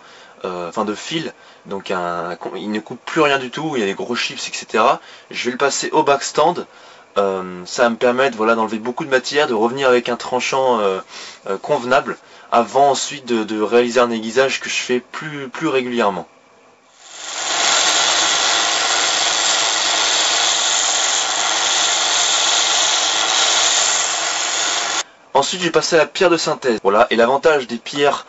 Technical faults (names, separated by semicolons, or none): clock drift between sender and receiver; repeated timing corrections; dropped samples